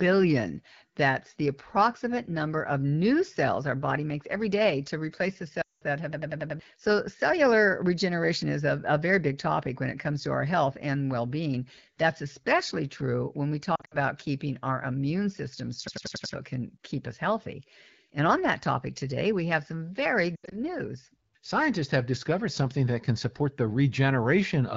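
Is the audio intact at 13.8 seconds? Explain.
No. From 13.75 to 13.95 s, between "especially true when we" and "keeping our immune system", there are lost AMR speech frames: about 120 ms of frames scattered across 160 ms, the longest gap 60 ms. Frames that failed their checksum were replaced by repeating the last good pitch and vocal tract settings at falling gain, so the sound warbles, smears and dips, then returns briefly weak and rough. A spectrogram shows harmonics frozen into flat streaks that fade, and the waveform envelope sags in patches.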